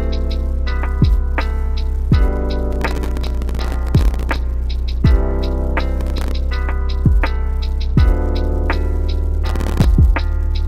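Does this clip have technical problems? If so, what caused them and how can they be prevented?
Yes. A gritty, tearing crackle rides on the sound from 2.72 to 4.36 s, then in shorter bursts from 6.01 to 6.31 s and from 9.46 to 9.85 s. This is processor overload crackle. The processor fell behind and kept missing the deadline for each very short audio buffer, roughly a millisecond and a half long, and every miss dropped in a hard-edged sliver of silence. The first burst suggests on the order of a hundred misses. Preventing it means reducing the processing load or raising the buffer size so each deadline has enough headroom.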